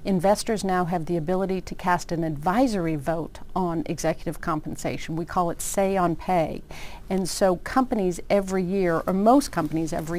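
Throughout, a faint, gritty, inharmonic fizz tracks loud and high passages: crude rate conversion from 48 kHz to 44.1 kHz by unfiltered nearest-sample picking.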